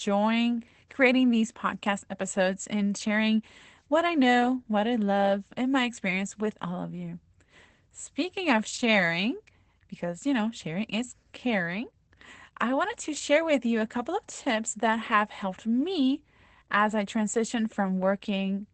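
Opus voice compression is present across the whole clip. The SILK linear-prediction coder is working in wideband mode, and nothing is left above 8.8 kHz, so sibilants and breath lose their top and the speech sounds dulled. The excitation is coarsely quantised, which gives the voice a plainly audible hoarse, mildly robotic edge. The level of damage points to a low bitrate, around 12 kbps, which fits SILK coding 20 ms frames.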